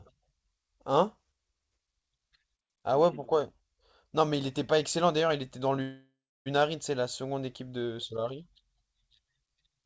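At 5.82 s a call audio freeze holds the speech for 0.64 s. A fading buzz or hiss ends in 0.29 s of silence. Delayed packets likely emptied the jitter buffer.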